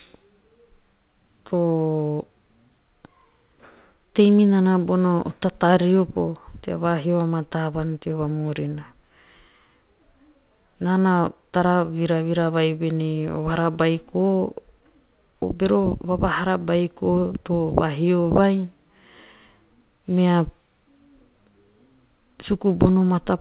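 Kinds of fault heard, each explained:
No kinds of fault are heard in this speech.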